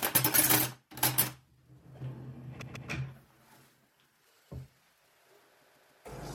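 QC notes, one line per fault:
2.61–2.89 s, repeated frames: a 144 ms block plays two extra times, adding 288 ms, so the sound stutters. On a spectrogram, identical 144 ms patches sit side by side. The waveform shows the same shape copied.
5.61–6.04 s, repeated frames: the same fault, with a 144 ms block playing three extra times and adding 432 ms. The stutter is longer, and the spectrogram shows four matching tiles side by side.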